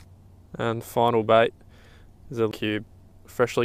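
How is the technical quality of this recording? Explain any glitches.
One glitch stands out, a CD skip at 2.51 s. The laser lost its track and landed on another turn of the spiral, so a brief mute of roughly 15 ms gives way to audio resuming from a different point.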